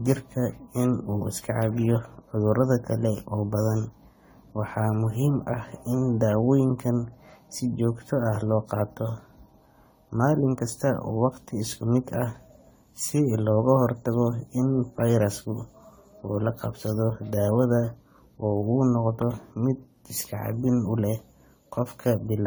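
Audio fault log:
Throughout: generation loss. The speech sounds swirly, smeared and hollow, and consonant attacks blur into the following sound. The likely cause is repeated lossy re-encoding, consistent with an AAC-LC chain at about 64 kbit/s applied around ten times. Each pass quantises on a shifted frame grid, so noise and spectral holes accumulate well beyond what that bitrate alone would produce. The band still extends to 20 kHz.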